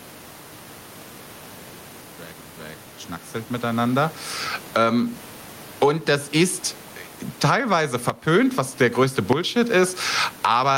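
Gain pumping runs through the whole clip. The gain was likely set far too high, so a fast limiter clamps down on every loud syllable. The gain swings about 15 dB. Levels sound squashed.

A loud pop hits at 8.10 s, just before "was der größte". A second comes at 9.33 s, just after "was der größte". Each is a single sharp pulse, roughly 20 dB above the speech, likely a voltage spike from a plug, switch or static. The speech continues underneath.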